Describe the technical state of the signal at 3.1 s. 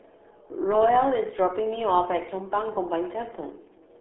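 At 3.1 s you're hearing the RealAudio 14.4 codec, which runs through the whole clip. The speech is squeezed into a narrow phone-like band from about 250 Hz to 3.5 kHz, with nothing above 3.8 kHz, and the coding damage is heavy. That starved, smeared quality fits an 8 kbit/s dial-up-era speech codec throwing away most of the detail, so the speech comes out muffled and gargly.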